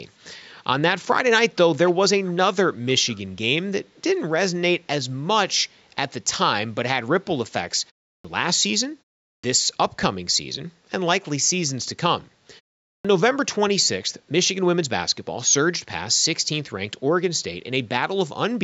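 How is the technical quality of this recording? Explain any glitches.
The recording has two kinds of glitch: a faint echo leak early on, and clipped starts after a pause later in the clip.

The echo leak comes at 1.51–1.55, 1.86–1.93, 2.24–2.35 and 3.06–3.19 s. Short, delayed scraps of speech trail the main sound by 327 ms, at about 25 to 35 dB below it. The likely cause is a far-end loudspeaker whose echo canceller let some residue through.

The clipped starts after a pause come at 8.16, 9.35 and 12.96 s. Each follows a pause of 0.33 to 0.44 s. About 85 ms of onset is swallowed, so speech starts abruptly. The output device dozed in the silence and needed time to wake.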